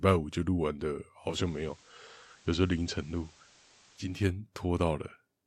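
Digital radio blending to analogue runs from 1.15 s to 4.26 s in this speech clip. The receiver lost its digital stream and cross-faded over about 0.33 s to the station's FM broadcast, then faded back. While on FM, a steady hiss sits roughly 30 dB under the signal. Loudness stays matched, so the switch shows up in the added noise.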